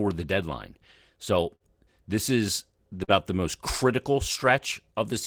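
At 1.55 s a burst of packet loss runs to 1.63 s: the last sound is stretched and faded for about 46 ms, then 40 ms is skipped, unlike a brief smear. At 3.04 s short concealed packet loss blends a 36 ms patch back in, a quick wobble, with 40 ms gone by 3.11 s.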